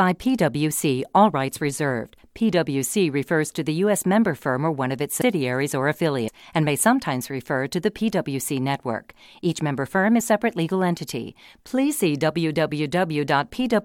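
Compressed frames skipped in this speech clip at 5.2 s, 6.27–6.29 s and 10.2 s: each time roughly 150 ms of audio drops out, consistent with about seven 23.2 ms frames the decoder never played.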